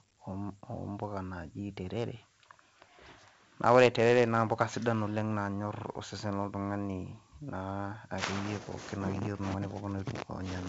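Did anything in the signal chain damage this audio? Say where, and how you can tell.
Yes, at the codec stage. Throughout the speech a gritty hiss rises and falls with the level of each syllable, and consonant attacks sound roughened. That is 4-bit ADPCM compression: each sample is coded as a coarse step from a prediction, so the error is noise riding under the signal. On a spectrogram, broadband noise fills the gaps between harmonics during loud passages, and nothing appears above 7.8 kHz, which points to 16 kHz sampling at around 64 kbps.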